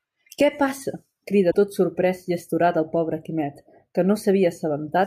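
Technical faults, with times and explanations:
1.50 to 1.55 s, broken MP3 bit reservoir: The audio jumps ahead, and a garbled stretch of about 48 ms follows, just before "tot sorprés i astorat". That length fits two 24 ms MP3 frames. The likely cause is frames cut out of the stream. Each MP3 frame can borrow bytes stored in earlier frames. After the cut, the next frames look back and find another frame's bytes. They decode into garbage until the borrowing catches up.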